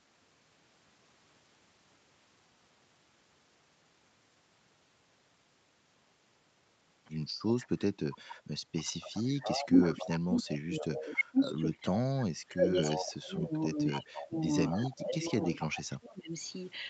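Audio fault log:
7.59–11.19 s and 12.84–15.66 s, echo leak: A second copy of the speech trails the original by about 275 ms. It is fairly strong in the first stretch, around 5 dB below the direct speech, and weaker in the second, around 10 dB down. The likely cause is a far end playing the call over a loudspeaker whose echo canceller let part of the microphone pickup through. That residue returns as a delayed, doubled voice.
9.23–16.33 s, speech suppressed in double talk: While both sides are active, the talker's level sinks repeatedly and in places drops out in fragments, at its deepest by roughly 30 dB, adding up to about five seconds of affected speech. This is likely an echo canceller that could not tell the local talker from loudspeaker echo during overlapping speech and attenuated everything at once.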